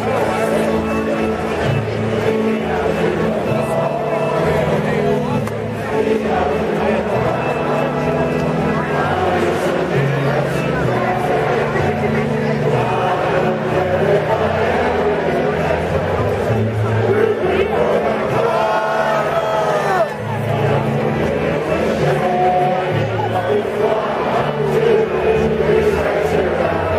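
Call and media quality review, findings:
Repeated frames, 19.47–19.51 s: short stutter, one 23.2 ms block (fits a single compressed frame) played twice more, adding 46.4 ms. Writer/transport resending frames. Waveform shows an identical segment tiled three times.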